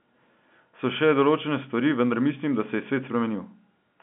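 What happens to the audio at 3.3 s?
Nothing goes wrong at 3.3 s: the speech carries on intact, with only the narrow 150 to 3400 Hz telephone band of its G.711 coding audible there.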